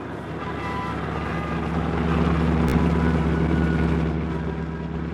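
At 2.69 s a brief Bluetooth stutter interrupts the sound for about 50 ms, ending at 2.74 s. Packets arrived late or not at all, so the receiver kept replaying its last short buffer until fresh data returned. This is heard as a quick buzzy chatter, like a tiny machine-gun burst, which fits roughly three lost frames of about 15 ms each. Afterwards the sound picks up further along, skipping the missing material. On a spectrogram the gap shows as a short band of identical, repeated vertical slices with sharp edges. In the waveform the same small cycle appears copied several times in a row, with a hard join at each repeat.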